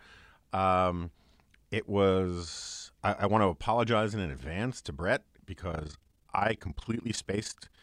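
Overlap-add ripple runs from 5.72 s to the end of the speech: the frames were rejoined with an overlap whose windows don't sum to a steady gain, so the level dips by about 11 dB around 30 times a second, giving a rough flutter.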